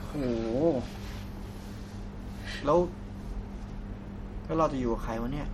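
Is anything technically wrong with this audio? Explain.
Yes. MP3 compression damage runs throughout the speech and is plainly audible as a watery, swirly texture with smeared attacks. The encoder, likely starved of bits, which fits about 48 kbps, zeroed weak frequency lines and removed everything above 17 kHz. A spectrogram shows a flat ceiling at 17 kHz and flickering gaps in the upper bands.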